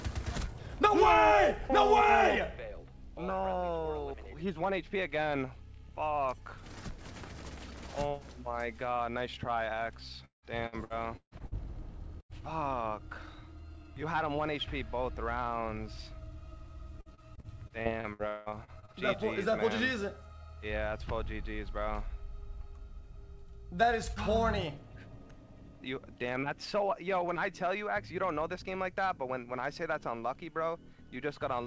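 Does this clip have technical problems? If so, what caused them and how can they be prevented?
Yes. There is repeated packet loss (robotic sound) from 10.25 to 11.55 s and again from 17.00 to 18.97 s. Packets kept arriving late or not at all, and each gap was filled by stretching the last sound before the next gap came. The first stretch has six gaps, the longest 175 ms, with about 40% of it patched. The second has fifteen gaps, the longest 180 ms, with about a third patched. Unlike a single dropout, this gives a continuous choppy texture over more than a second. Prevention: give the call a steadier network path, such as wired rather than congested Wi-Fi, with enough jitter-buffer headroom.

There is also a burst of packet loss at 12.21 to 12.32 s. About 90 ms of audio was lost in one go. The receiver held the last sound and faded it, so the result is a brief held buzz or hiss, and the sound then picks up further on with that piece missing. 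What separates it from the robotic stretches is that it is one isolated hole and not a rapid series of them. Prevention: reduce momentary congestion, or enable forward error correction or redundancy on the call.

The call path itself carries nothing above 8 kHz, which fits a wideband codec such as G.722.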